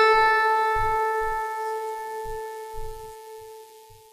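A music clip with plainly audible codec damage throughout. The treble sounds bright but synthetic. Its harmonics fail to line up with the lower band, so cymbal-like detail turns gritty and metallic. This is likely HE-AAC compression rebuilding the top octaves by band replication, which fits a bitrate near 24 kbps.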